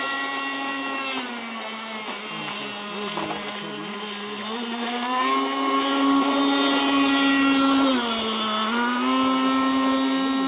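Nothing in the audio stood out as a fault on listening.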